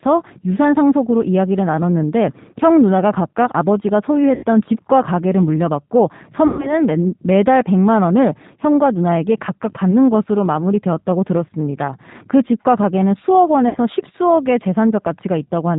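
Throughout the speech the sound is narrow and slightly rough, with a faintly synthetic edge and nothing above 4 kHz. That is the G.729 codec at 8 kbit/s, plainly audible here. Instead of sending the waveform, it rebuilds the speech each 10 ms from a vocal tract filter, a pitch predictor and a few pulses. That sparse model smooths away detail and gives the voice its artificial texture.

At 4.35 to 4.45 s, 6.47 to 6.81 s and 13.69 to 13.77 s the speech smears into a stretched sound that fades, and it stays weak and distorted for a moment afterwards. This is VoIP packet loss concealed by the speech codec. About 80 ms, 120 ms and 60 ms of audio went missing, which fits runs of 20 ms packets. The decoder stretched its last pitch and filter across each gap while lowering the level. Because every frame builds on the one before, recovery lags after the audio resumes.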